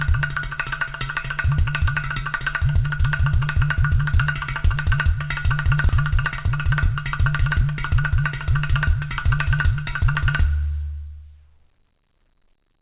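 At 5.89 s a block of audio was dropped, roughly a third of a second, while later audio was already queued, so playback jumps straight ahead with no gap and the sound on either side of the cut is spliced together abruptly. From 6.04 s to 8.11 s the jitter buffer, holding more audio than it targets, trimmed short pitch-period pieces again and again, about 150 ms in total, so this stretch plays roughly 7% fast at unchanged pitch and sounds hurried. All of it passes through a G.711 A-law call path at 64 kbps, which leaves nothing above 4 kHz.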